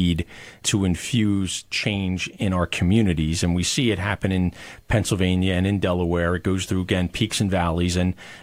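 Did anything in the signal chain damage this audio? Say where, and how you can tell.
No, nothing audible in this speech recording points to damage at any stage of the signal chain.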